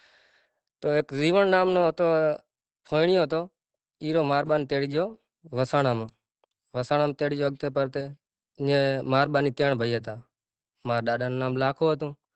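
Right from the start and all the way through, the speech sounds muffled and a bit hoarse, with nothing above 8.5 kHz. That's likely Opus compression dropped into its speech mode, which fits a bitrate around 16 kbps, and the damage is plainly audible.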